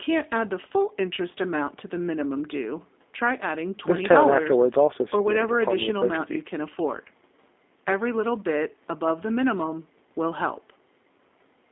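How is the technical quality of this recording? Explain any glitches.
The recording has one fault that runs through the whole clip: G.729 codec damage, which is plainly audible.

From start to finish the speech sounds narrow, rough and synthetic. It sits in a telephone band of roughly 250 Hz to 3.6 kHz, with no air or sibilant brightness above that. The codec does not transmit the waveform itself. It sends a vocal tract filter, a pitch predictor and a few pulses for each 10 ms frame, and the decoder rebuilds speech from those parameters. That rebuilding is what gives the voice its artificial, grainy texture. The sound fits the 8 kbit/s G.729A variant. The missing low bass comes from the call's microphone high-pass filter, which is normal and not a fault.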